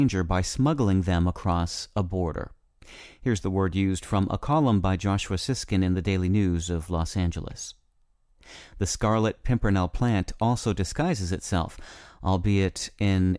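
No technical faults are audible.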